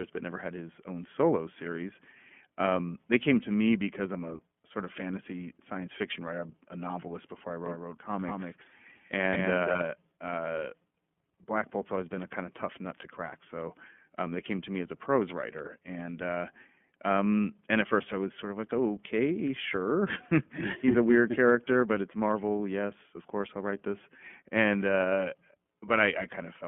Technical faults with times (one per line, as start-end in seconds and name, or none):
0.00-26.68 iLBC codec
7.66-9.82 doubled audio track